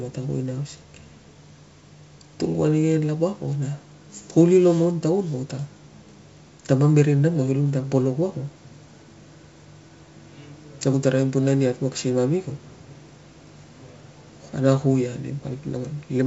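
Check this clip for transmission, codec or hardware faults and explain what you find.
No faults found in the speech; it passes through G.722 wideband telephone coding at 64 kbit/s, which leaves at most a faint trace on the sound.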